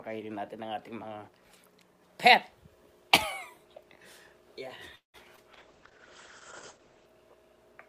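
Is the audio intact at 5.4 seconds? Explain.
No. From 5.36 to 5.39 s there is a short concealed packet loss. About 20 ms of the stream never arrived in time, and the receiver covered the gap with about 16 ms of synthesized audio, extending the preceding sound by its pitch or as shaped noise, then crossfading back into the real signal. The result is a brief smear or wobble in place of the missing material.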